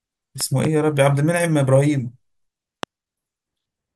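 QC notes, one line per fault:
0.41–0.67 s, loud pop: two sharp pops in quick succession, peaking at about 10 dB above the speech, which carries on beneath them. A voltage pulse from a plug, switch or static likely entered the chain, and the following circuits shaped it into brief, hard transients.
2.83–2.85 s, loud pop: a single short pop, peaking at roughly 15 dB over the speech, which continues underneath. This is likely a sudden voltage step, such as a switch or driver glitch, added to the signal and turned by later stages into a sharp thump.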